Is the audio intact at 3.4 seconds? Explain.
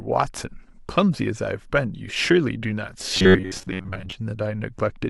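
No. From 3.16 to 4.12 s there is robotic sound from repeated short buffers, likely from audio arriving too seldom, with most of the span replaced by loops of roughly 10.7 ms. That forces a rigid, metallic 93.8 Hz buzz, visible as evenly spaced horizontal harmonics and identical repeating waveform cycles.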